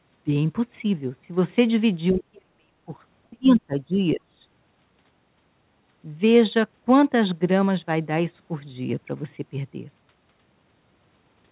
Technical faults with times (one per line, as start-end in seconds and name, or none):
2.12-2.91 speech suppressed in double talk
3.30-4.37 speech suppressed in double talk
3.96-4.00 other side's voice leaking through